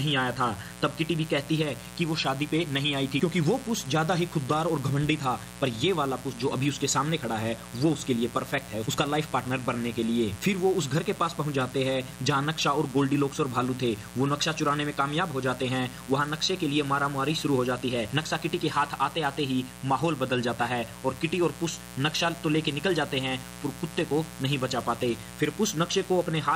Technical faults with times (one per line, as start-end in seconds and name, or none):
0.00-26.55 mains buzz